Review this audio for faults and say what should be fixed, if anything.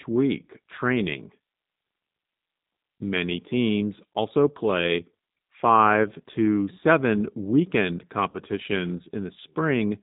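Throughout the clip the speech sounds slightly rough and synthetic, and nothing above 4 kHz comes through, so sibilants are dulled. That is the G.729 codec, and the damage is plainly audible. The sound is rebuilt from a vocal tract filter, a pitch predictor and a few pulses per 10 ms frame, which points to 8 kbit/s G.729A. To prevent it, carry the call on a wideband codec such as G.722 or Opus instead of G.729.

From 8.30 to 8.40 s, just after "five to seven weekend", the speech smears into a stretched, fading sound and stays weak briefly after. That is VoIP packet loss concealed by the speech codec. About 40 ms went missing, which fits four lost 10 ms frames, and the decoder stretched its last pitch and filter at falling gain. Because each frame builds on the previous one, recovery lags. To prevent it, reduce network loss with QoS priority and add jitter buffering or redundancy such as FEC.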